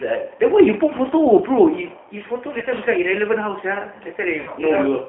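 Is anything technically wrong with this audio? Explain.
Yes. The whole clip carries G.729 codec damage, and two short dropouts are patched by packet loss concealment.

Throughout, the speech sounds like the G.729 codec. The band runs from about 200 Hz to 3.5 kHz, pointing to an 8 kbit/s coder. It rebuilds speech from a filter, a pitch predictor and a few pulses per frame. The result is plainly rough and synthetic.

From 2.59 to 2.65 s, and again from 4.41 to 4.51 s, there is VoIP packet loss concealed by the speech codec. The gaps are about 30 ms and 60 ms, fitting one and then two lost packets. The decoder stretches its last pitch and filter and fades them. This leaves a brief stretched, fading sound, and the speech stays weak just after each gap.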